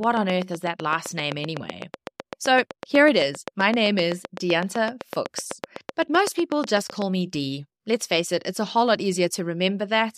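From 0.04 s to 7.03 s a train of clicks runs over the speech: around fifty near-identical pulses at a regular 7.88 per second, peaking roughly 15 dB above the signal and ticking through pauses too. The likely source is electrical interference or a faulty connection or power supply.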